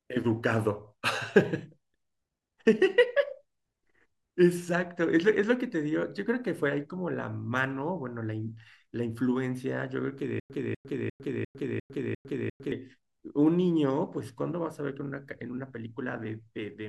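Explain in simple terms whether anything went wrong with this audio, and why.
Something went wrong in playback: the stream most likely stalled, and each time it tried to recover it replayed its last scrap of speech before running dry. That produces a stutter with silent gaps from 10.40 to 12.72 seconds. The same quarter-second burst comes back six times, at a steady rhythm of about one every 0.35 seconds, with a tenth of a second of dead silence between repeats. The speech that belonged in that stretch is lost.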